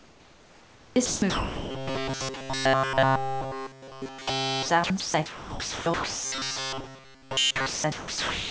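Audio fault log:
Throughout: sound chopped by the voice detector. The speech keeps dropping out and coming back, with word edges and quieter stretches swapped for a smooth, even hiss, while the real room noise sits about 26 dB below the speech. About 7 s of the 8.5 s is replaced. The likely cause is the sender's voice detector repeatedly switching transmission off and filling the gaps with comfort noise.
1.70–4.68 s and 6.25–7.66 s: robotic sound from repeated short buffers. The speech turns into a stiff, metallic buzz fixed at 133 Hz that only loosely tracks the speech. The first stretch is entirely buzz, and the second is mostly buzz with some real audio breaking through. This likely comes from the receiver replaying a tiny slice of audio, about 7.5 ms long, while fresh audio arrives too slowly. The repeat rate of that slice becomes the buzzing pitch.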